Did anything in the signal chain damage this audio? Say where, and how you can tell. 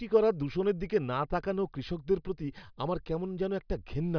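No, nothing in the signal chain damaged this speech. Listening through the whole recording, no stage from the wiring and converter through to playback leaves any audible mark on it.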